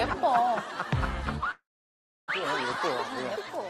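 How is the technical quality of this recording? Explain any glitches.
The recording has one clear glitch, a call audio freeze from 1.51 to 2.30 s. The last sound briefly continues as a fading buzz, then about 0.66 s of silence follows. On a waveform it is a short tapering tail and a flat line; on a spectrogram, a smeared streak and then an empty band. The likely cause is delayed packets draining the jitter buffer. When they arrive, the audio resumes where it stopped, nothing is lost, and everything after it runs about 0.77 s late.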